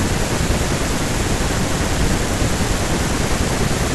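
Nothing stood out as a technical fault on listening to this speech recording.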